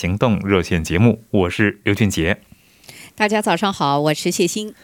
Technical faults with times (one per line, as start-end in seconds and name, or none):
0.35-0.95 drift correction step